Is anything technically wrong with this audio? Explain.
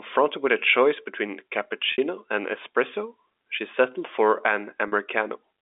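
Yes. There is packet loss with pitch repetition at 1.92 s and 4.88 s. The first gap lasts 60 ms and the second 40 ms. The receiver bridges each by repeating the last pitch period. Both sound like a briefly held, buzzy tone.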